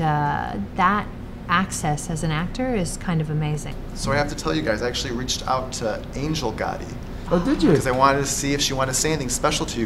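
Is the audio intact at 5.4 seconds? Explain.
Yes, the audio at 5.4 seconds is intact, with no dropout, click, distortion or other fault at that moment.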